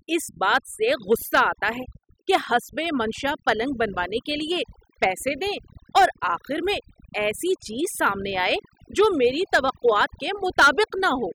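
Overdone noise removal runs throughout: a too-strong noise reducer suppresses bands near the noise floor, leaving a reduced background with twinkling specks.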